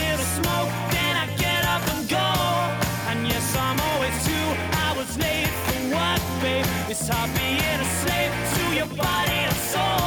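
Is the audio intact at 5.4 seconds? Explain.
Yes, at 5.4 seconds the audio is intact, with no dropout, click, distortion or other fault audible at that point.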